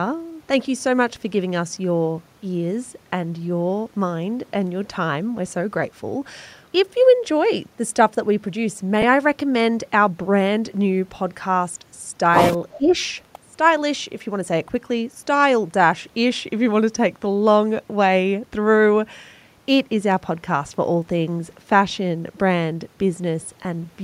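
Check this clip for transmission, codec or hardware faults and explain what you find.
Three kinds of fault are audible: two short dropouts from lost LE Audio frames, a brief echo leak, and a moment of speech suppressed in double talk.

Lost LE Audio frames occur at 9.02 s and from 23.63 to 23.65 s. The first gap lasts 10 ms and the second 20 ms, which points to one and then two dropped frames. The LC3 decoder fills each gap by reusing the last spectrum with random signs. So the speech briefly smears into a noisy blur.

An echo leak is heard from 12.71 to 12.91 s. A faint delayed copy of the speech arrives about 0.38 s late, at roughly 20 dB below the main speech. The likely cause is an echo canceller on a loudspeaker side failing to remove everything its microphone picked up, so the residue went back down the line.

Speech is suppressed in double talk from 12.78 to 12.93 s, overlapping the echo. 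The near speech dips by about 15 dB for roughly 150 ms and sounds briefly pulled down. This likely happened because both sides were talking at once, and the echo canceller turned down the talker along with the echo it could not separate.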